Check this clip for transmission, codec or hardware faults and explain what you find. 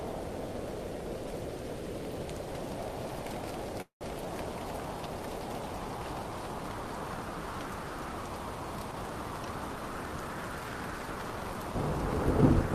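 Two transmission faults are audible: a short stall followed by a catch-up.

From 3.81 to 4.03 s the sound stops moving forward. The last moment is stretched into a fading buzz that drops to near-silence for roughly 120 ms, and then the audio resumes exactly where it left off. This call audio freeze most likely happened because delayed packets left the jitter buffer empty. The receiver filled about 194 ms with that decaying continuation. Nothing was lost, but the playback now runs 194 ms later than before.

From 8.91 to 10.36 s the audio sounds hurried, moving at about 113% of normal speed while the pitch stays unchanged. This is jitter buffer speed-up. With more audio queued than its target, the receiver repeatedly cut out tiny pitch-period-length slices to shrink the backlog, removing about a fifth of a second in total across that stretch. The timing compresses without any shift in pitch.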